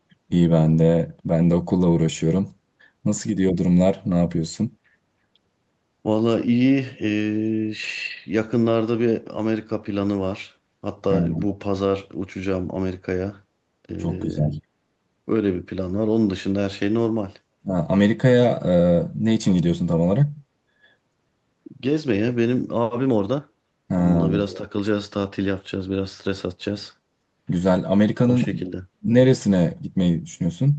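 Four short dips in level occur, at 3.52–3.56 s, 14.24–14.63 s, 17.6–17.7 s and 28.95–29.1 s. The first is a slight drop of about 5 dB. The second pulls the speech down by about 15 dB for roughly 0.4 s. The last two fall by about 35 dB, close to a brief cut-out. This is likely speech suppressed in double talk: with both sides talking at once, the echo canceller could not tell this talker from loudspeaker echo and attenuated the talker's speech along with it.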